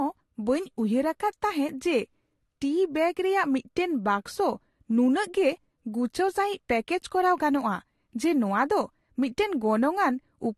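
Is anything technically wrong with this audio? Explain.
Yes. Transcoding between lossy codecs runs throughout the speech, from start to finish. The sound was likely encoded with one lossy codec and then re-encoded with another, and the second encoder spent its limited bits on the first one's artefacts while adding its own. Two kinds of smearing and swirl sit on top of each other, and nothing is present above 12.2 kHz, which fits a Vorbis stage followed by AAC-LC at low bitrates near 48 kbit/s.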